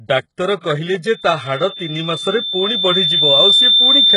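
Throughout the speech, treble stops at 11 kHz and sounds synthesized and gritty, heavily damaged, likely HE-AAC compression at a very low bitrate, around 12 kbps, rebuilding upper bands by copying lower ones. From 1.07 s to the end, a loudspeaker feedback squeal at 3.6 kHz swells over roughly two seconds to about 10 dB above the speech, as the microphone-speaker loop exceeds unity gain.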